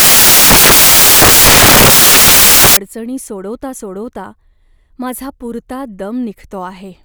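From 0 to 2.77 s the reader assembles samples from the wrong bytes, turning low bits into loud broadband noise until the speech returns at "अडचणी सोडवता सोडवता".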